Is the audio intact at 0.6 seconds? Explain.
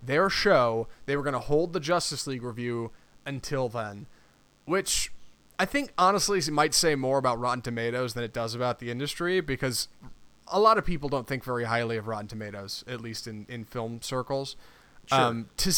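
No. At 0.6 s, as throughout the clip, a DECT cordless phone buzz sits faintly under the speech. A nearby handset's radio bursts every 10 ms are rectified into a thin, harmonic-rich 100 Hz buzz, harsher than smoother, duller 50 or 60 Hz mains hum.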